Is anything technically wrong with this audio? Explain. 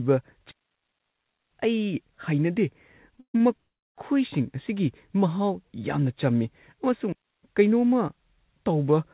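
Yes. The speech has three kinds of fault, heard through a narrowband call path with nothing above 4 kHz, which fits G.711 coding.

Digital wireless dropout: from 0.52 to 1.51 s the sound falls into a clean hole of near silence lasting about a second, and again from 7.12 to 7.43 s for about 0.31 s. There is no noise burst on either side. The wireless link lost too much data, so the receiver muted with a very fast fade.

Repeated stalls (stutter): between 3.11 and 3.41 s the audio catches and drags four times. The last sound is stretched to fill about 190 ms, with the longest hold 139 ms, yet nothing is missing. Late packets kept draining the jitter buffer, and the receiver extended what it had each time.

Call audio freeze: from 3.57 to 3.98 s the sound hangs briefly and then goes nearly silent for about 0.37 s before resuming exactly where it stopped, adding roughly 0.4 s of gap. The likely cause is packets held up in transit, which emptied the jitter buffer while the receiver faded out its continuation of the last sound.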